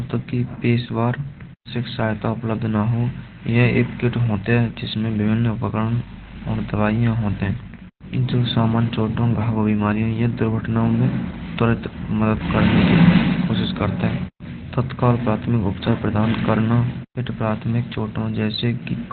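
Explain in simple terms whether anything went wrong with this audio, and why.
Yes, something went wrong, and it lasts from the very start to the very end. The speech sounds muffled and hoarse, as if heard over an old telephone line, because nothing above about 4.5 kHz survives. The likely cause is heavy Opus compression: squeezed this hard, the encoder drops to its speech-only mode and keeps just a narrow band of the lower sound, leaving the voice dull and hoarse.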